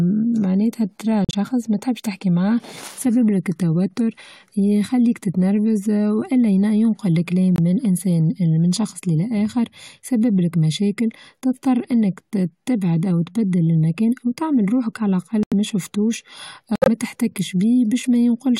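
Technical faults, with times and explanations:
1.25–16.88 s, corrupt frame muted: the speech drops abruptly to silence four times, at 1.25–1.35 s, 7.56–7.60 s, 15.43–15.53 s and 16.76–16.88 s, for gaps of roughly 40 to 130 ms. The decoder rejected compressed frames with flipped bits, and the player filled each rejected stretch with silence. The holes are a few frame lengths long, and the speech resumes on schedule because the timing is preserved.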